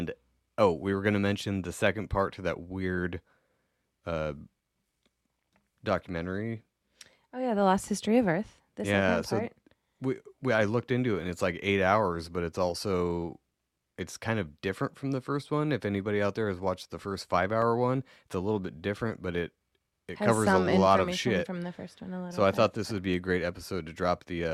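A single sharp click cuts through the speech at 17.62 s, after "watched the first five", and again at 23.14 s, after "thought this would be". Both are likely dropped samples: a tiny fraction of a millisecond missing, so the waveform jumps abruptly.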